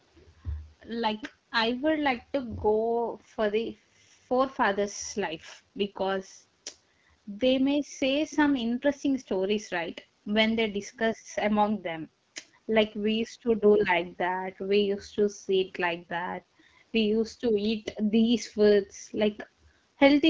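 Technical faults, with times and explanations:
Throughout: AMR wideband (HD Voice) codec. The speech sounds rough and raspy, which points to a low rate near 8.85 kbit/s, with noise-filled highs above 6.4 kHz.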